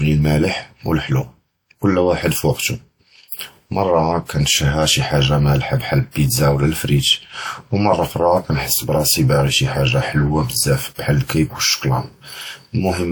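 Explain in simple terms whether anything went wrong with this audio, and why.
Pre-echo shows up at 3.28, 4.26, 6.11 and 10.94 seconds in this speech. The compression smears noise across each block of sound, so a short hiss of about 30 to 40 ms creeps in just before these sharp sounds, softening their attack.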